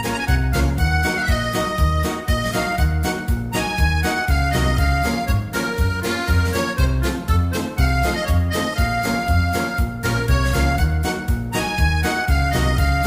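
Nothing here gives any trouble: there's no dropout, click, glitch or distortion anywhere, and the audio just runs along as it should.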